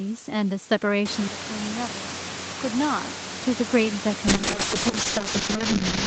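At 4.29 s the call's bitrate drop sets in: the bandwidth estimate fell and the Opus encoder was pushed to spend far fewer bits, which fits a fall from around 32 kbps to roughly 6 kbps. The speech is then coded much more coarsely, turning rough and watery, and it stays that way for the last 1.78 s, through to the end of the clip, with no recovery before the audio stops.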